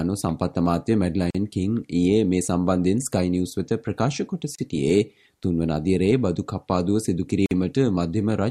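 Three brief dropouts cut into otherwise continuous sound: at 1.30 s for about 42 ms, at 4.55 s for about 32 ms, and at 7.46 s for about 50 ms. Each has blurred edges, and the sound resumes exactly where it broke off. These are gaps at a join of encoded pieces. Separately encoded segments were butted together without trimming, so each one's leading encoder delay and padded final frame remain as silence at the seams.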